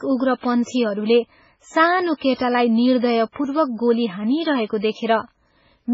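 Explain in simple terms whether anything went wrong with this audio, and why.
MP3 compression, throughout: heavy squeezing, likely from a low-quality MP3 encode, removes everything above 7.6 kHz, so the speech sounds dull, watery and swirly.

Pre-echo, 2.34 to 2.40 s: the codec spreads its noise across a whole block, so a short hiss leaks about 58 ms ahead of a sharp attack and blurs it.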